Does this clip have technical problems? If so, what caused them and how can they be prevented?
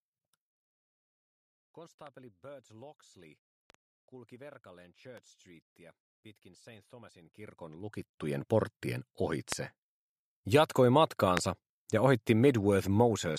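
Yes. There are two kinds of fault: loud pops and zipper noise.

Loud pops occur at 2.07–2.09, 3.70–3.77, 5.17–5.20, 9.52–9.54 and 11.37–11.39 s. Each peaks around 20 dB above the sound, which carries on underneath. The one at 3.70 s is a double pop. These are isolated voltage pulses that the following circuits shape into sharp thumps, likely from a plug, switch, static discharge or driver glitch. Unlike zipper noise, they are single events with no level change attached. Securing connections, grounding against static and keeping drivers stable would prevent them.

Zipper noise runs from 7.18 to 8.38 s, while the level changes by about 25 dB in 1 dB steps at roughly twenty per second. Each unsmoothed step adds a small click, so together they form a continuous ticking that rides on the sound for as long as the level moves. That link to a level move separates it from the scattered pops. Ramping gain per sample instead of per block would prevent it.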